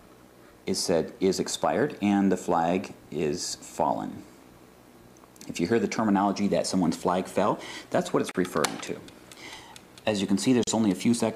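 At 8.31 s the sound drops out for about 33 ms, and again at 10.64 s for about 36 ms. Each is a gap at a join of encoded pieces: separately encoded segments were butted together without trimming, so the encoder's leading delay and final-frame padding remain as silence. The holes open abruptly, their edges softened by the codec, and the sound resumes exactly where it left off.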